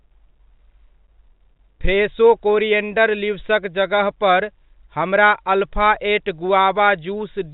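No technical faults can be heard in this speech.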